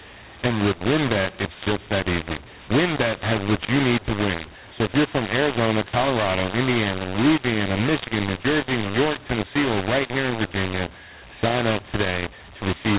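The telephone path encoded the speech with the A-law variant of G.711 but decoded it as mu-law, so for the whole clip every 8-bit code is mapped back through the wrong logarithmic curve. This is the mu-law and A-law mixed-up fault. Sample levels come out scrambled, some too loud and others too quiet, and the smallest values are pushed well above silence. The speech sounds harsh and gritty, and the pauses fill with hiss instead of going quiet. The 4 kHz bandwidth ceiling of the 8 kHz telephone coding can still be heard beneath the distortion.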